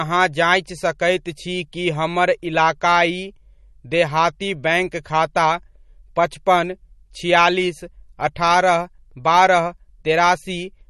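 Speech runs the whole way through with a watery, swirly texture and no content above 12 kHz, so the sibilants sound dull and smeared. This is likely MP3 compression, and the damage level fits a low bitrate near 40 kbps, where the encoder drops the treble and weak frequency lines flicker between frames.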